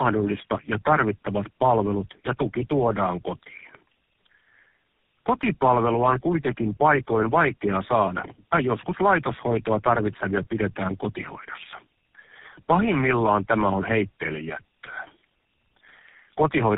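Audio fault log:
Throughout: tandem speech coding. The speech sounds like it went through three different low-rate phone codecs in a row, probably AMR-NB, then G.729A, then GSM full rate, with plain G.711 hops between them. Each coder re-encodes the previous one's damage, so the roughness and warble pile up, and nothing comes through above about 3.7 kHz, which leaves it muffled.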